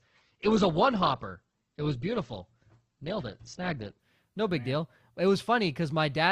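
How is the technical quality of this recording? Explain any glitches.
The speech starts at reduced quality. From 0 to 4.0 s this is an adaptive stream starting at a low bitrate: the player opened on a lean version (nothing above 8.2 kHz, which points to roughly 12 kbit/s Opus), then switched up just before "no big deal it". Unlike a rebuffer, the improvement is sudden and gapless.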